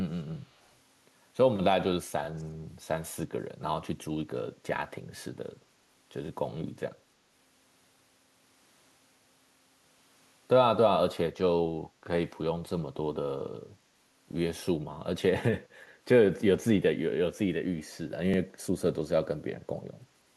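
At 2.24 to 2.27 s, a tiny stutter marks overlapping chunks. Each 4-second chunk starts early, so about 23 ms plays twice. At 2.38 to 2.44 s and 3.19 to 3.24 s, a very faint scrap of the voice returns about 352 ms late. This is likely echo leak, where a loudspeaker echo slipped past the canceller. The same stutter recurs at 6.27 to 6.29 s, 10.29 to 10.31 s, 14.31 to 14.34 s and 18.34 to 18.36 s.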